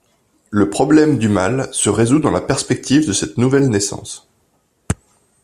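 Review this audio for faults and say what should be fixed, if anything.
A block of digital silence at 3.59 s, about 0.7 ms long, heard as a tick in the speech, where the sound drops abruptly to silence and back. Prevent it by giving the audio callback enough headroom to always fill its output buffer on time.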